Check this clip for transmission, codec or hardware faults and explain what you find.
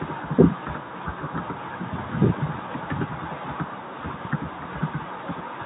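No transmission, codec or hardware fault turns up anywhere in this speech clip. There is some room noise in the background, about 42 dB below the speech, and it belongs to the recording space, not the system.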